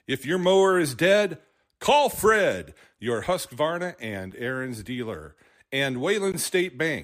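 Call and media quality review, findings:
Gap between stream segments: segment timestamps misaligned at boundaries, player pads with silence. Hard-edged dropouts at 4.31 s (about 8 ms) and 6.32 s after "dealer and" (16 ms). Two-second spacing fits 2 s segments; no speech lost.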